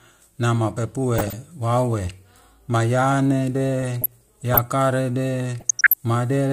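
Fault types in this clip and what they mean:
DAB burbling: weak DAB reception let bit errors slip past error correction into the MP2 audio, so corrupted samples put short noise blips in single sub-bands. The speech picks up burbling at 1.16 to 1.33 s, 3.81 to 4.58 s, and 5.60 to 5.94 s.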